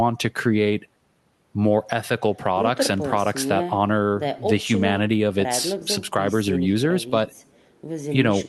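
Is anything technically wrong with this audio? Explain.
No, nothing is technically wrong; the speech shows the ordinary coding character of a WebRTC call path, its top end stopping around 12 kHz in a way that fits Opus at about 32 kbps.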